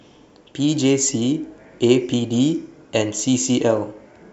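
Two devices are likely running on unsynchronised clocks about 150 ppm apart, so one sample is dropped or repeated whenever the drift reaches a whole sample. From 0.16 s to 4.21 s this produces around thirty clock slip clicks, faint regular ticks roughly every 0.15 s.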